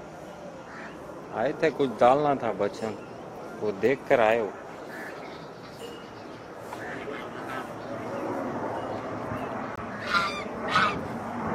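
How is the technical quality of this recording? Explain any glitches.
One glitch stands out: a gap between stream segments, from 9.76 to 9.78 s. It is a short hole of about 21 ms with hard edges. The sound stops abruptly and resumes just as abruptly. The timing fits a boundary between segments of 6 s each. The time stamps of two neighbouring segments did not quite meet. The player filled the missing span with silence. Nothing was lost. The gap only adds time.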